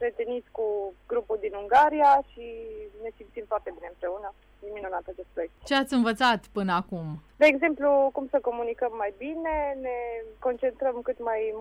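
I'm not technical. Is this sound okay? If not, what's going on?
Yes, nothing wrong can be heard in this sound.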